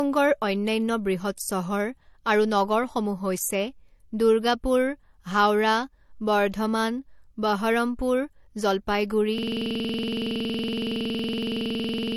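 A speech clip. Throughout, the sound carries two layers of compression damage: smeared, watery highs and a dull top end. That mix points to transcoding between lossy codecs, likely an MP3 encode at around 47 kbit/s passed again through HE-AAC near 40 kbit/s. At 9.38 s a system hang loop begins and lasts to the end. A 46.44 ms slice repeats about 60 times. It is heard as a rough stutter-buzz at 21.5 Hz, which fits a 2048-sample ring buffer cycling while the system froze.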